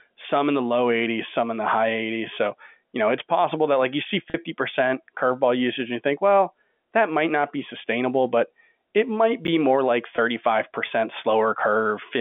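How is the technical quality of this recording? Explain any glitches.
The speech arrives over a telephone-band line, limited to roughly 200 Hz to 3.5 kHz as with G.711 telephone coding, and it has three brief glitches of two kinds.

Packet loss with pitch repetition occurs at 4.30 to 4.34 s and again at 10.16 to 10.18 s. The receiver bridged each gap, 40 ms and then 20 ms, which fits two lost packets and then one, by repeating the last pitch period. Each gap therefore sounds like a momentarily held, buzzy note rather than a silent dropout or a click.

Chunks out of order occur at 9.45 to 9.48 s. A 10 ms chunk plays two chunks late, after audio that should follow it. Nothing is missing, so unlike the concealed losses there is no held buzz. Instead there is a tiny jumbled moment with three hard joins.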